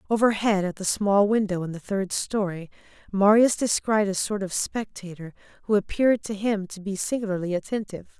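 Nothing technical goes wrong anywhere in this speech recording, so there's nothing to flag at any point along the way.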